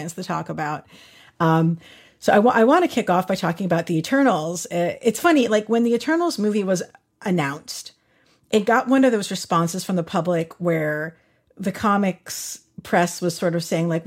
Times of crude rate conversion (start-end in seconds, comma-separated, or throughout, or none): 5.03-14.07